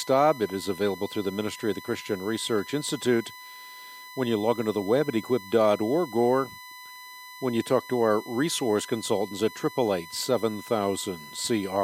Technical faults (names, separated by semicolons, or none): USB whine